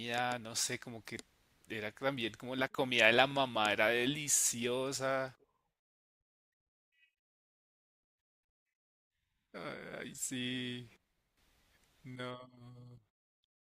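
No audible technical faults anywhere in the speech recording.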